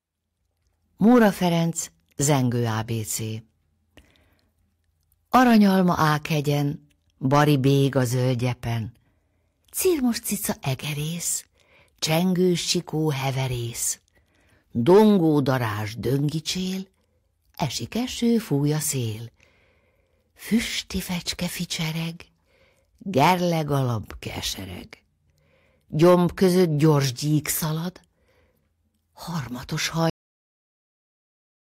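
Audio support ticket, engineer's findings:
Hard clipping: harsh crackle on speech peaks at 1.07–1.46 s, 5.35–6.10 s, 7.33–7.98 s, 14.88–15.53 s, 23.18–23.33 s (before "alap kesereg") and 26.02–26.90 s (before "gyík szalad"). Gain stage overdriven by about 4–6 dB. Peaks flattened, adding high harmonics.

Cut-off end: audio stops abruptly mid-sound at 30.10 s, then digital silence with no decay. Final buffers never written or played out, so playback ends without a natural tail.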